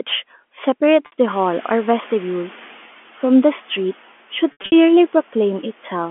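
Packet loss with pitch repetition at 1.06 to 1.12 s: a 60 ms gap is bridged by repeating the last pitch period, so it sounds like a briefly held, buzzy tone. On a spectrogram, frozen harmonics appear as flat horizontal lines, and the waveform shows identical repeated cycles.

The noise suppressor is catching up from 1.28 to 2.75 s. Room noise jumps by about 20 dB around one and a half seconds, and the lagging estimate lets it through at first. Over about 1.47 s it is pushed down by about 5 dB, visible as a background band that fades gradually.

More packet loss with pitch repetition comes at 4.52 to 4.72 s. About 160 ms is lost, scattered over 200 ms, with the longest run 80 ms, so the sound stutters and buzzes. A spectrogram shows repeated flat harmonic blocks that fade, with brief dips in the waveform envelope.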